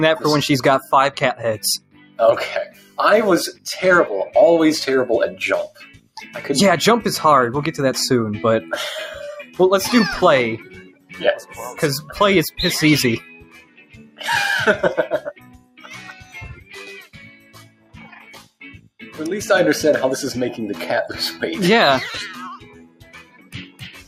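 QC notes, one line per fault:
Throughout: noise suppressor applied to music or sounds. A speech-tuned suppressor stayed active and treated sustained material as noise. The level swings by around 15 dB as held tones and tails sink while attacks pass, so the sound pumps and thins.
1.78–2.19 s, 2.65–2.98 s, 5.32–6.35 s, 9.44–9.59 s, 10.58–11.59 s, 13.2–14.21 s, 15.28–19.02 s, 22.57 s to the end: sound cut by the noise suppressor. The suppressor classed these stretches as noise and pulled them down by about 17 dB (about 9 dB at 9.44 s). Sustained and decaying parts collapse, with the longest dip running several seconds from 15.28 s.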